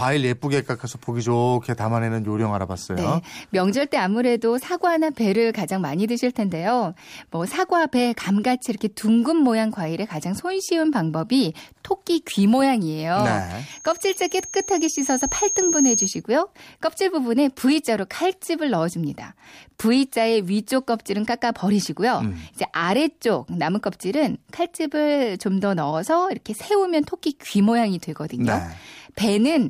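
From 13.70 to 16.22 s a single 6.5 kHz tone swells over roughly two seconds until it is about as loud as the speech. This is loudspeaker feedback squeal: the microphone was picking up its own loudspeaker, and loop gain above one at that frequency let it build.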